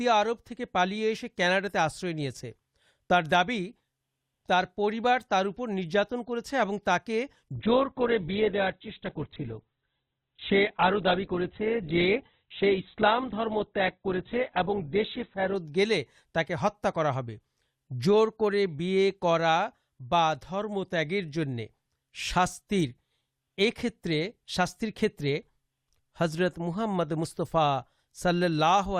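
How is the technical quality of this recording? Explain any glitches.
The recording has one quality fault, a sudden drop in fidelity partway through.

From 7.56 to 15.56 s, an adaptive stream at a lower bitrate takes over. It switches abruptly, with no gap, to a far leaner encoding, which fits a fall to around 8 kbit/s Opus. Nothing survives above 4.4 kHz, so the speech turns dull until full bandwidth returns.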